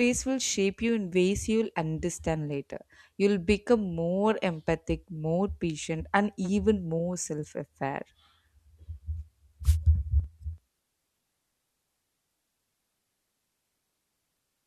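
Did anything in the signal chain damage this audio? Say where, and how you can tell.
Yes. The radio link of an analogue wireless microphone, ahead of the converter, produced a wireless microphone noise hit from 9.64 to 9.77 s. It is heard as a brief burst of static about 0.13 s long laid over the speech. Reflections briefly cancelled the FM carrier, so the receiver's own noise rose and partly masked the signal. On a spectrogram it shows as a short vertical band of broadband hiss. The waveform shows a fuzzy, noise-filled patch.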